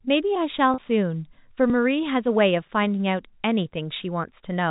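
A speech clip carried over G.711 telephone coding, with the audio band-limited below 4 kHz. From 0.74 to 0.78 s there is packet loss with pitch repetition. About 40 ms went missing, which fits two 20 ms packets, and the receiver bridged the hole by repeating the last pitch period. The result is a brief held, buzzy tone rather than silence, and that sustained buzz separates it from a hard skip. At 1.70 s there is a tiny jump in the sound, and no gap at all. The likely cause is a dropped buffer (overrun): a few milliseconds of samples were overwritten before being read, and the two sides were spliced directly together. Unlike concealment, nothing is filled in.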